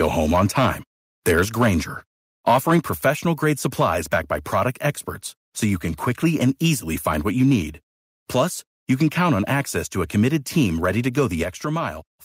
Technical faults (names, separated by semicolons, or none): microphone overload; microphone volume stepped down